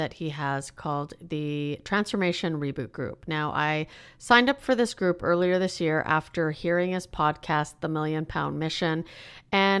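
No technical faults are audible anywhere in the speech recording.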